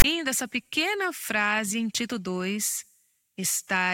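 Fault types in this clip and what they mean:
File tags played as audio: text metadata is read as samples, giving a one-sided rasp, then padded silence, for 0.04 s before "essa pequena frase em".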